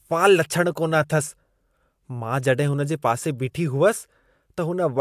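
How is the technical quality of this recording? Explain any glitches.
Nothing to report: the speech recording has no audible glitches or technical faults.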